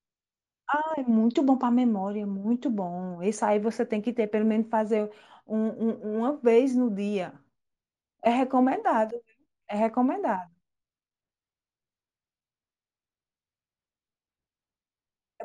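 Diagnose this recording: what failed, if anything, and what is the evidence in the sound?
From 3.16 s to the end, the highs turn dull and sibilants gain a faint metallic shimmer, with mirrored energy between 8 and 16 kHz, roughly 35 dB down. This is imaging from linear upsampling at sample-rate conversion. Straight-line interpolation, consistent with 16 kHz raised to 44.1 kHz, leaves spectral copies unfiltered.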